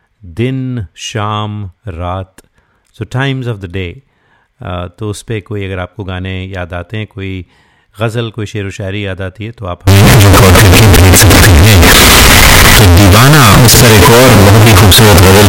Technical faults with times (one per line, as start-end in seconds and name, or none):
9.87-15.48 float read as integer